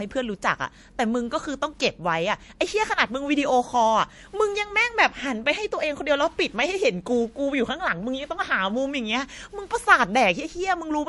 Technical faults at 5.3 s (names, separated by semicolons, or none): MP3 compression